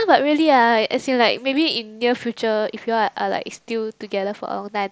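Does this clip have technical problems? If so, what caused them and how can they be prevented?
No, nothing stood out on listening to this speech, which came over a Bluetooth mSBC headset link, so there is nothing to trace or prevent.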